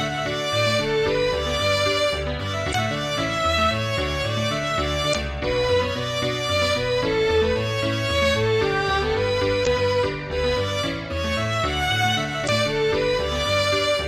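Damaged data in a compressed stream shows up at 2.71–2.75, 5.11–5.15, 9.63–9.67 and 12.45–12.49 s as brief glitches of about 40 ms each, where corrupted bytes made the decoder misread frames and lose sync until it found the next valid frame header.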